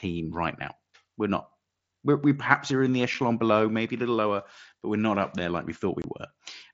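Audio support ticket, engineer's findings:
Unconcealed Bluetooth headset packet loss: hard dropouts at 3.14 s (about 7.5 ms) and 6.02–6.04 s (about 22.5 ms). That fits one and then three lost 7.5 ms mSBC frames on the headset–phone link, with silence or an idle pattern filling the gap and no concealment. Both gaps have abrupt edges. The wideband mSBC path carries the speech with only light grain.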